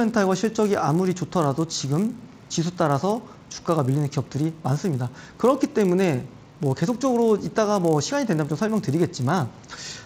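From start to end, a resampler restarted on every block leaves a 100 Hz buzz riding on the signal. That rate fits 10 ms blocks converted from 16 kHz to 48 kHz independently, each edge lacking its true neighbouring samples and carrying a small error that sounds whenever signal is present.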